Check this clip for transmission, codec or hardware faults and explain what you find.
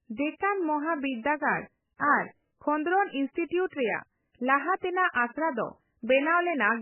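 The clip has one codec fault, present throughout the speech: MP3 compression at a very low bitrate, heavily damaged, likely around 8 kbps. Starved of bits, the encoder removed everything above 3 kHz and dropped weak spectral lines frame by frame, so the audio sounds dull, watery and swirling, with smeared consonant attacks.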